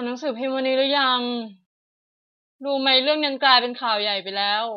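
For the first 2.0 s the speech sounds dull and muffled, its treble rolled away smoothly. This is de-emphasis applied wrongly: a treble cut meant to reverse pre-emphasis was applied to audio that had none, or applied twice, pulling 10 kHz about 10 dB below 1 kHz.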